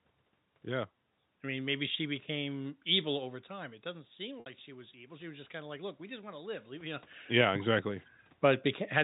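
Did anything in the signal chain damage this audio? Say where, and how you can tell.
Yes, two stages left marks on this one.

First, call processing: automatic gain rising from about 3.48 s to 7.13 s. The input dropped by about 13 dB around 3 s, when the talker moved back from the mic, and the AGC responded by slowly adding about 8 dB. You can tell it's gain and not the talker because the room noise swells right along with the voice over those few seconds instead of staying put.

Second, the network: packet loss with pitch repetition at 4.40 s. About 60 ms went missing, which fits three 20 ms packets. The receiver's concealment covered the gap by looping the last pitch period and fading it out, so you get a brief held, buzzy tone where the speech should have continued, then a short cross-fade as real audio comes back.

Third, call processing again: automatic gain falling from 7.25 s to 8.99 s. 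The talker came back toward the mic around 6.5 s, so the level arrives hot on top of the extra gain. The AGC then backs off by about 4 dB. That's why the sound starts loud and gradually sinks, with the background noise dropping along with it.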